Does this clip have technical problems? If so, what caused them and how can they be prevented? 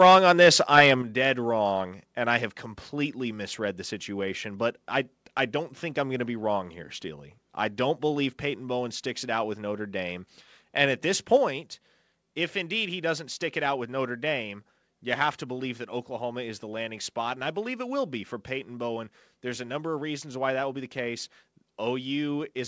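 Yes. From 0.01 to 0.91 s the speech has a harsh, crackling edge, with the loudest peaks flattened rather than rounded, just before "dead wrong and I". This is microphone overload. The input pushed roughly 6 dB past the converter's ceiling, so a few percent of the samples hit the limit and had their tops sheared off. The likely cause is an input level set too high for this talker. To prevent it, lower the microphone's input gain or move it further away so that peaks stay below full scale.

The microphone volume stepped down twice. At 1.02 s the voice and the room noise both drop abruptly by about 7 dB, right after the distorted opening and just before "dead wrong and I". At 11.37 s, after "at this", there is a smaller drop of about 4 dB. Each is a single step with no gradual fade. The likely cause is the call software's automatic gain control detecting a level that was too hot and cutting the device's input volume in one move. 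To prevent it, set a sensible input level beforehand, or turn off automatic gain adjustment so the software doesn't step in mid-call.

The call path is consistent with a G.722 connection at 64 kbps, and nothing is present above 8 kHz.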